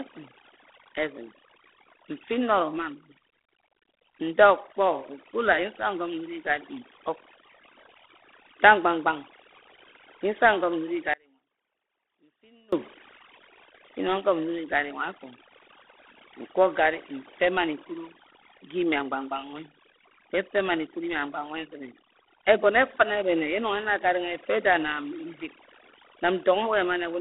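From the start to the end of the speech, overdone noise removal is at work. The noise reducer was pushed too hard. It shuts individual frequency bands down whenever they sit close to its noise estimate. Quiet parts of the voice fall into those bands and vanish with the noise. The background drops and breaks up into small twinkling specks.

G.726 ADPCM coding also runs through the whole clip, and its damage is plainly audible. The codec sends each sample as a small coded step from a running prediction. Here the coarseness points to the 24 kbit/s rate, with too few bits per sample. That leaves a harsh, rasping hiss that rises and falls with the speech level. The line band spans roughly 250 Hz to 3.5 kHz. Nothing reaches above 3.8 kHz, so the sound is boxed and dull.

From 11.14 s to 12.72 s there is an audio dropout to a faint residue. The speech cuts off abruptly and returns just as suddenly, 1.59 s later. 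This is not a pause or a fade. Only a faint trace of sound remains in the gap, around 30 dB below the normal level. The likely cause is a loss of the signal upstream while the path after the break stayed live.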